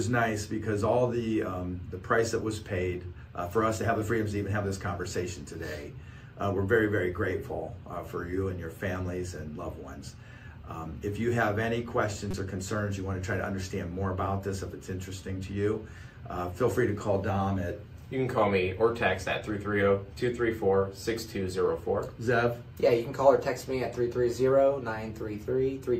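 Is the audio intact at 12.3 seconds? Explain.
No. A corrupt frame is decoded from 12.31 to 12.34 s. Damaged bits in a couple of compressed frames were played anyway, so misread gains and codes scatter energy to wrong frequencies. It sounds like a brief glitch, peaking at about -20 dBFS.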